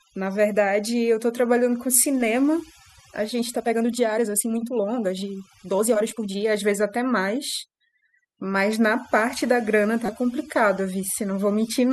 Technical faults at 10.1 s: overdone noise removal; damaged data in a compressed stream

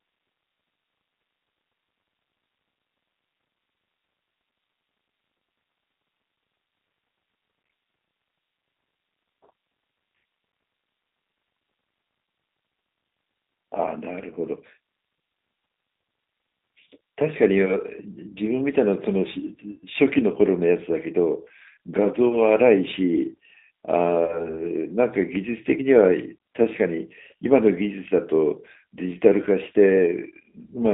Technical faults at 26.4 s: G.729 codec

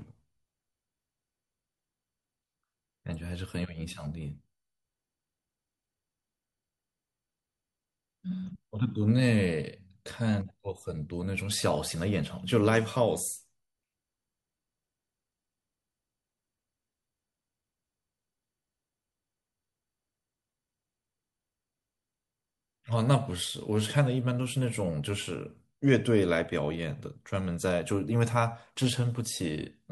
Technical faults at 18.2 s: none

